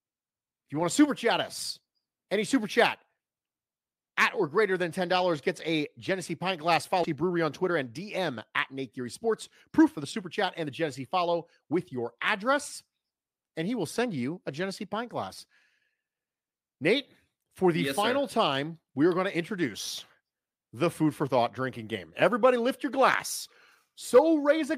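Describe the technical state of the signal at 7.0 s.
At 7.03 s the speech has a skip ahead. Roughly 0.7 s of audio was dropped, either in transit or by an overflowing jitter buffer, while later audio was already queued. Playback jumps forward with no gap, joining the two sides almost directly.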